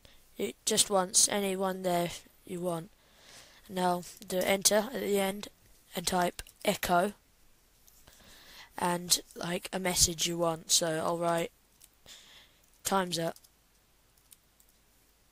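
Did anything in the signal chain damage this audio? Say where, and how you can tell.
Yes. Across the whole clip there is a fine hiss and graininess riding on the sound itself. It swells on louder, brighter passages and drops away when the level falls, which rules out a fixed noise floor. That behaviour points to the converter stage and sample clock jitter. The sampling clock wanders by around a microsecond, so each sample is taken slightly off time. The resulting error tracks the waveform's slope and sits roughly 30 dB below the signal.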